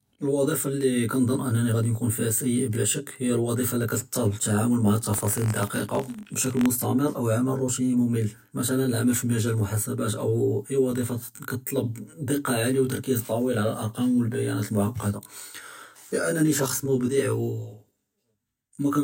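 From start to finish there's channel delay, with comb filtering: one side arrives around 20 ms late, and folding to mono carves notches starting near 30 Hz and repeating evenly up the spectrum, so the speech sounds rough and slightly doubled the whole way through.

Then from 5.12 to 6.67 s you get buffer tearing. The write and read positions in the ring buffer have crossed, so a tiny sliver of each period is stale audio from roughly 40 ms earlier, spliced in with hard edges. That gives a rattly, robotic buzz at 46.9 Hz, which fits a 1024-sample buffer, riding on the speech while it lasts.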